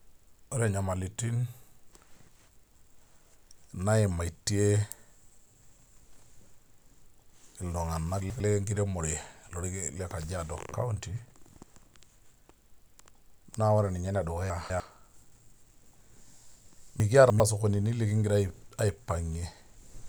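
Chunks out of order at 8.2–8.4 s, 14.5–14.8 s and 17.0–17.4 s in this speech: a 100 ms block plays one, two, then three blocks later than it should, so nothing is lost, but each spot sounds jumbled.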